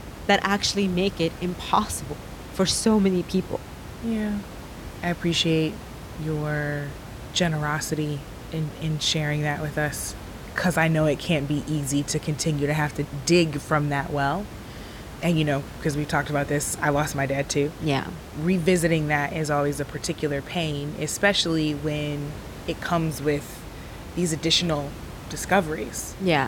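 Nothing stood out on listening to this speech recording, beyond the room's own background noise sitting about 14 dB below the speech.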